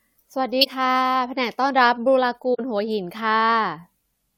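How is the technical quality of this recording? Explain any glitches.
Two short glitches spoil it, at 0.61 to 0.67 s and again at 2.54 to 2.60 s, each about 60 ms long. Both are a corrupt frame concealed: the AAC decoder hit damaged data, flagged it, and papered over the gap by muting or replaying a scrambled version of the last good spectrum. The length points to roughly two lost frames each time.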